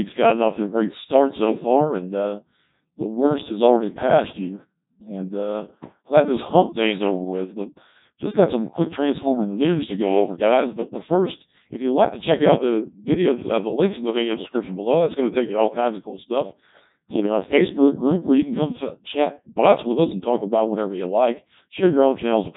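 Codec 2 vocoder damage runs through the whole speech clip: the voice is rebuilt from sine waves using only pitch, voicing, energy and spectral envelope, so it sounds heavily robotic and buzzy, with nothing above 3.8 kHz, which fits a very low 1.2 kbit/s mode.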